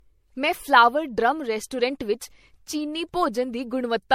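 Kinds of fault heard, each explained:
generation loss: The speech was likely encoded as MP3 several times over, compounding quantisation noise, so it sounds swirly, hollow and smeared, with nothing above 16.5 kHz.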